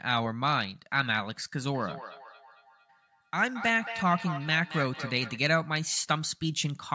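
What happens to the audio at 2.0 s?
The speech is trailed by thinner, ringing repeats about a fifth of a second apart, peaking at about 10 dB below the speech, from 1.68 s to 5.41 s. This is feedback echo between two devices: one plays the other's microphone signal, which is picked up again.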